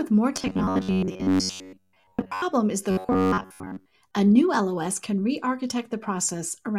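From 0.36 to 2.43 s, before "is the", and 2.91 to 3.91 s, after it, robotic sound from repeated short buffers gives a metallic 93.8 Hz buzz. The likely cause is a roughly 10.7 ms chunk looping while most of the audio is skipped. On a spectrogram, this appears as rigid, evenly spaced harmonics. The waveform shows identical repeating cycles.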